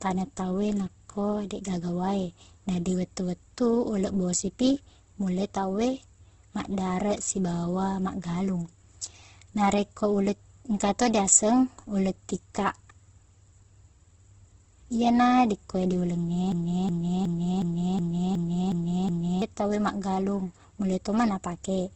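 A speech recording that has likely passed through a low-rate Opus encoder in its music (CELT) mode, with the grain and band-edge behaviour pointing to something around 12 kbps. That Opus compression is audible for the full length: nothing survives above about 8.1 kHz, and because the codec keeps each band's energy but refills starved bands with folded or noise-like content, the speech takes on a rough, grainy, hissy texture rather than clean detail. From 16.52 s to 19.42 s the playback or stream likely stalled and kept resending its last held fragment, producing a broken-record loop: just after "dikkue diuleng", a 0.37 s piece repeats exactly, eight times back to back, so whatever should have played in those seconds is gone, and normal speech returns at "tau e maggalung".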